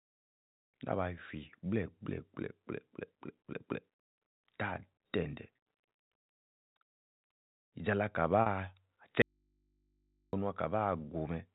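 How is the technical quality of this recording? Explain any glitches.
The recording has three glitches: two brief packet-loss repairs and one longer dropout. It sounds like a telephone-band call, with nothing above 4 kHz.

Packet loss with pitch repetition occurs at 5.56 to 5.58 s and again at 8.42 to 8.46 s. The first gap lasts 20 ms, which fits one lost packet. The second lasts 40 ms, which fits two. In each, the receiver filled the hole by repeating the last pitch period. Both gaps are short, so the fill never fades to silence. Each sounds like a brief held, slightly buzzy tone.

An audio dropout to a faint residue runs from 9.22 to 10.33 s, about 1.1 s. The sound cuts out abruptly rather than fading. The gap holds only a low mains hum, roughly 45 dB below the normal level. The likely cause is a loss of the wanted signal while the path after the break stayed live, so the hum of the open input came through. 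The sound returns just as abruptly at 10.33 s.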